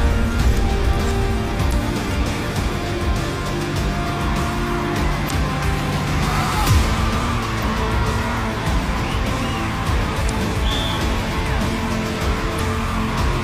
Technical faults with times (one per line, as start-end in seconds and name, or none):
1.69-1.73 damaged data in a compressed stream
5.27-5.31 damaged data in a compressed stream
7.59-7.63 damaged data in a compressed stream
10.25-10.30 damaged data in a compressed stream
12.55-12.60 damaged data in a compressed stream